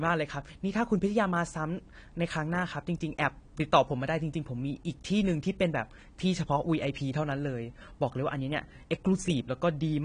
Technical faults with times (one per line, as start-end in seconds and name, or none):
0.00-10.05 AAC compression